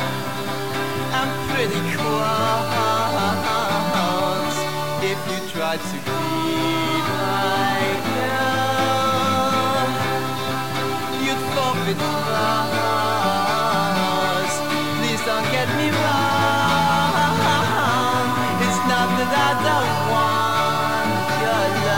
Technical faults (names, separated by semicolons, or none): low bit depth without dither